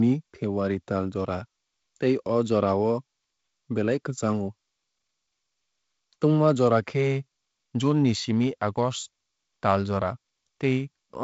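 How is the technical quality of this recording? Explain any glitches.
Nothing glitchy turns up here, just speech carried over G.722 wideband telephone coding at 48 kbit/s, so the sound tops out around 7.7 kHz with a faint hiss in the upper band, which is simply how that path sounds.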